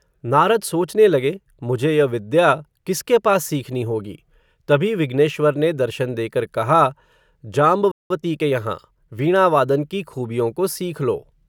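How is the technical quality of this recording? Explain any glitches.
The speech has two linked glitches, a brief dropout followed by a hurried stretch.

Playback stall, 7.91 to 8.10 s: the output goes silent mid-flow for about 190 ms, then resumes. The player likely ran short of data or had its thread blocked, so nothing reached the output until it recovered.

Time-compressed catch-up, 8.10 to 9.34 s, starting just before "वादन की": to clear the backlog left by the stall, the player cuts out and cross-fades small slices, playing about 1.15 times faster. Speech sounds rushed but keeps its pitch.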